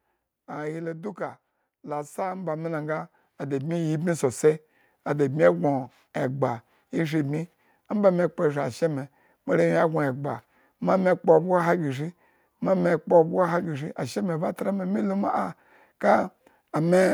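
From 1.17 s to 4.49 s the speech and the room noise beneath it swell together by about 11 dB over roughly three and a third seconds: automatic gain rising. The gain control judged the input too quiet and raised its gain step by step. What separates this from a talker moving closer or speaking louder is that the background climbs in lockstep with the voice, and the change is a smooth ramp rather than a sudden jump.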